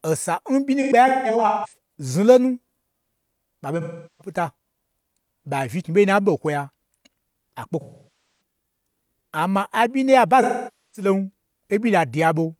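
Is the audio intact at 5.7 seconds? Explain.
Yes, the speech at 5.7 seconds plays through cleanly, with no audible dropout, glitch, distortion or other fault at that moment.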